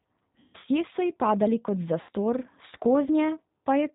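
The speech runs through a G.729 codec at 8 kbit/s, which rebuilds the voice from a filter, a pitch predictor and sparse pulses and passes nothing above 4 kHz, so it sounds band-limited, slightly rough and synthetic throughout. VoIP packet loss concealed by the speech codec hits from 0.40 to 0.66 s, where about 160 ms of audio goes missing across 240 ms, the longest gap 140 ms, and again from 2.01 to 2.10 s, where 80 ms is lost. The decoder stretches its last pitch and filter into a fading sound, and the voice stays weak just after each gap. The gap lengths fit 20 ms packets.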